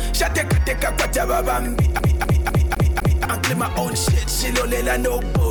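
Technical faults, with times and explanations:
1.99 to 3.25 s, CD stuck on one turn: the audio locks into a fast, even stutter, the same 0.25 s fragment playing five times in a row with a brief mute at each jump back, then carries on. A scratch on the disc knocks the laser back one track at the same point on each rotation, so playback keeps returning to the start of that 0.25 s stretch until the pickup gets past the damage.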